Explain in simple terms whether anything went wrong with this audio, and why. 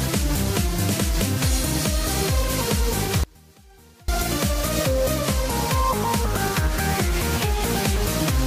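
Something does go wrong: there's an audio dropout to a faint residue from 3.24 to 4.08 seconds. The sound suddenly drops away for about 0.85 seconds, leaving only a faint ghost of itself, then snaps back. It's likely a brief signal loss while the line stayed open.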